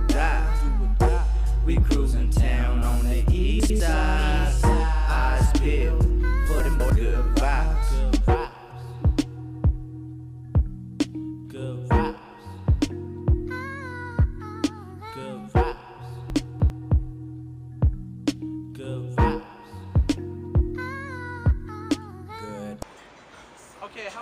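At 3.6, 6.6 and 16.3 s the audio briefly jumbles. These are chunks out of order: a 100 ms block plays late, after one, two and then three blocks that should follow it. Nothing is missing, but each reordering leaves three hard joins. On the waveform these are abrupt discontinuities. The spectrogram shows thin vertical broadband lines at each join, with spectral content that jumps back and forth over 3.6–3.8, 6.6–6.9 and 16.3–16.7 s.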